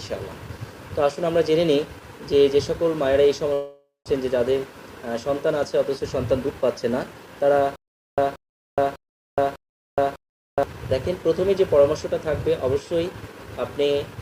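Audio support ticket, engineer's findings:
Long network dropout, 3.53–4.08 s. Concealment buzz fades into about 160 ms of silence; roughly 400 ms of audio never arrives. Likely a network gap at the receiver. The last sound is extended, then playback resumes further on without the lost section.

Jitter buffer speed-up, 5.99–7.43 s. Playback runs at 108% speed at unchanged pitch and sounds hurried. Receiver trims pitch-period-sized slices repeatedly to shed excess buffered delay, about a tenth of a second in total.

Stutter with silent gaps, 7.76–10.63 s. A 179 ms fragment repeats 4 times at a steady 600 ms period, with about 421 ms of digital silence between repeats. Likely a player or stream stall: each retry replays the last fragment, then underruns. Intervening audio is lost.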